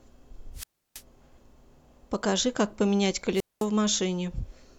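Speech with two wireless microphone squelch dropouts, at 0.54 to 1.02 s and 3.34 to 3.66 s. The radio signal fades, hiss rises, then the receiver mutes for 0.32 s and 0.21 s.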